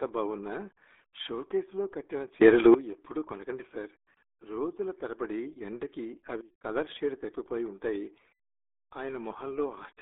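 Throughout, the speech carries RealAudio 14.4 codec damage: heavy gargly, muffled artefacts, with nothing above 3.8 kHz, consistent with an 8 kbit/s dial-up speech codec. From 2.42 to 2.74 s a sudden gain jump raises speech and background together by about 17 dB, likely from an unramped digital gain change. From 6.41 to 6.64 s a second sudden gain jump drops everything by about 20 dB.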